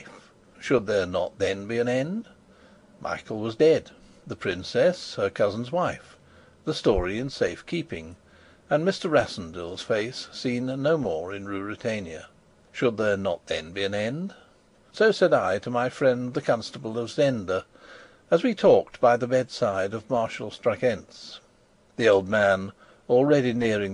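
No technical faults are audible.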